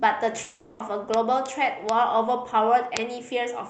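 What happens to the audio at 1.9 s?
At 1.89 s there's a bit error spike: a single flipped bit in one sample makes the value jump by a power of two and snap straight back. You hear it as one sharp, broadband tick that has nothing to do with the speech, sitting on top of the Opus call audio with its 8 kHz bandwidth.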